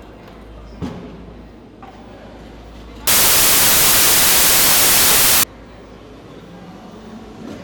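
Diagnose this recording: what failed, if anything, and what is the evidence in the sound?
Samples built from the wrong bytes, from 3.07 s to 5.43 s: a sample-format conversion fault. Across that stretch the everyday sounds are buried under loud, harsh broadband noise, which stops abruptly at 5.43 s. The reader assembled each sample's bytes in the wrong order or at the wrong offset, so the rapidly changing low-order bits landed in the most significant positions and dominated every value.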